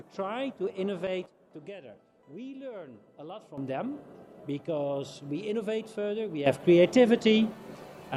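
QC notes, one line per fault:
1.26–3.58 s, sudden gain jump: level drops by about 10 dB in a single step, sound and background noise falling together, then returns at 3.58 s; likely a gain setting applied with no ramp.
6.46 s to end, sudden gain jump: level rises by about 12 dB at once, noise floor lifting with the sound, holding through the close; likely a bit shift or gain change applied without smoothing.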